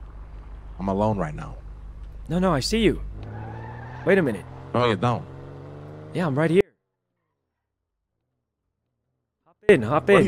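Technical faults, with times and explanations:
6.61 to 9.69 s, audio dropout to a faint residue: the sound cuts out abruptly for about 3.1 s, leaving only a faint trace roughly 40 dB under the normal level. It's likely the wanted signal was lost while the path after the break stayed live.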